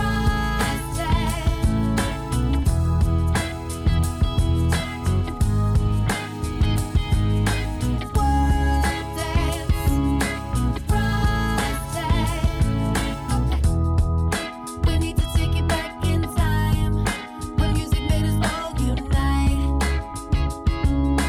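No technical faults are audible.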